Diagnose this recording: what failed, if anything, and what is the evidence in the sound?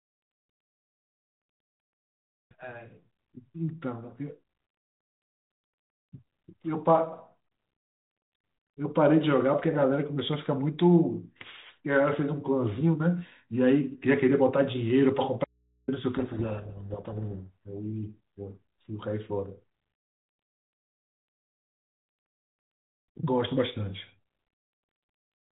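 The signal path was briefly interrupted, likely somewhere upstream of the codec such as the analogue wiring or input connection, while everything after the break stayed live. This is an audio dropout to a faint residue. From 15.44 to 15.88 s, about 440 ms, the speech cuts out abruptly and the gap holds only mains hum at about 45 dB below the speech level. The hum comes from the open input rather than from a pause or fade.

The decoder read the G.726 code words with their bit order reversed relative to the encoder. This is a codec payload misread. From 16.16 to 17.53 s the frames still decode, but each sample's difference value comes out wrong, so the speech is buried in harsh distortion for that stretch. It clears once both sides agree on packing again. Around it, the band-limited telephone sound with light codec grain points to G.726 at 32 kbit/s.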